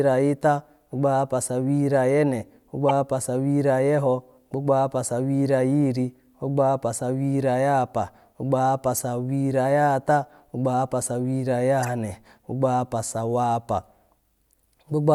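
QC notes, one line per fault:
2.89–2.91 s, corrupt frame decoded. A single damaged frame was played as if valid. Its misread gains put energy at the wrong frequencies, so a sharp, loud blip cuts through the speech.
11.83–11.88 s, corrupt frame decoded. Between "ahapa sawihiri" and "gbogbo ahapa", about two bad frames give a quieter, longer chirp of misplaced energy.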